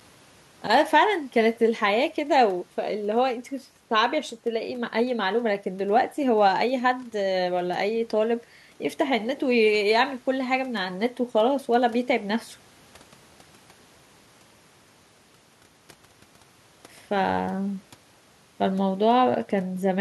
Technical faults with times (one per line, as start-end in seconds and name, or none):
none